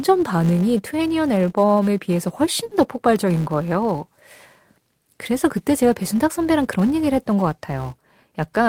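A speech recording carrying a steady 200 Hz buzz from a filter restarted on every block, so every 5 ms block starts with a small tick. Unlike mains hum, it rises and falls with the speech level. From 2.65 to 2.73 s, a burst of packet loss leaves the last sound held and fading for about 60 ms rather than falling silent, then speech resumes with about 60 ms skipped.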